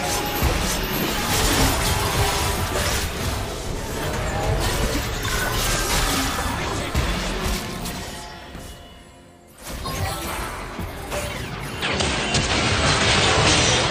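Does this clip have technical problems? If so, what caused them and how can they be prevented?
Yes. From 11.82 s to the end at 13.90 s, the sound abruptly dulls, losing everything above 8.9 kHz, shifting level by a few dB and gaining a faint new background noise, with no gap. The likely cause is an input switched to a poorer device, since a mere filter change wouldn't alter level and noise floor together. Locking the recording input and disabling automatic device switching prevents it.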